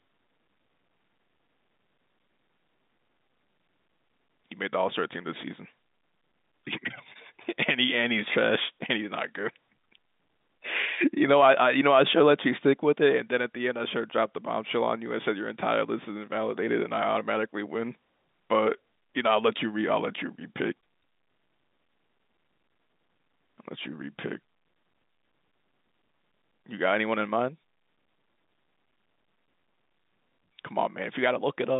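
No technical faults can be heard in the speech.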